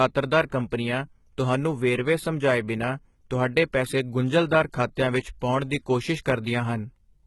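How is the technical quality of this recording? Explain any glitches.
Quality is poor, with heavy codec damage throughout. The sound is gritty and lispy, and nothing appears above 11.8 kHz. This is likely HE-AAC compression at a low bitrate, around 16 kbps, where replicated upper bands stand in for the real treble. On a spectrogram the top band looks smeared and misaligned, with a hard ceiling.

At 0.71 s there is a pre-echo. Codec noise spreads across the block ahead of an attack, so a short hiss of about 16 ms precedes it. A waveform shows low fuzz before the onset.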